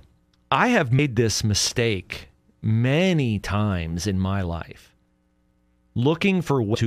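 Damaged data in a compressed stream appears at 0.98 s and again from 6.74 to 6.76 s. Corrupted bytes cause the decoder to misread those frames and lose sync while hunting for the next frame header, so each spot breaks the speech with a brief glitch.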